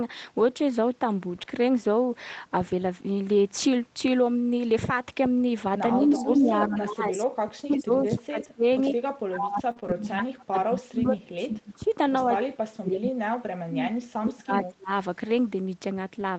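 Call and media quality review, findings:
Speech suppressed in double talk, 5.97–11.89 s, 12.25–13.88 s, 14.19–14.90 s. Echo canceller likely misread near-end talk as loudspeaker echo during overlap and attenuated it. Near-end speech dips by up to about 30–35 dB, fading or breaking into pieces.

Echo leak, 6.15–6.76 s, 8.39–8.45 s, 8.85–8.93 s. Far-end echo canceller likely left residual loudspeaker pickup in its send path. A delayed copy trails the voice by 100 ms, about 10–20 dB below it, as scraps, the first longest.

Short concealed packet loss, 9.71–9.78 s (40 ms missing) and 9.80–9.84 s (20 ms missing). Jitter buffer received nothing in time, so the decoder extrapolated the preceding sound to fill each hole. Heard as a brief smear or wobble that can swallow a short consonant.

Lost packet rebuilt from error correction, 9.76–9.78 s (one 20 ms frame) and 9.84–9.94 s (three frames, 60 ms). 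Opus in-band FEC decoded low-bitrate redundant copies from following packets, so there is no gap. Those frames sound rougher and noisier, extending the disturbance just after 9.7 s.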